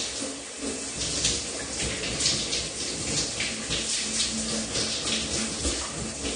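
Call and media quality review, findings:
Dull, smeared sound throughout; spectrogram shows a flat ceiling at 9.7 kHz. Likely AAC compression, with plainly audible damage fitting a low bitrate near 32 kbps.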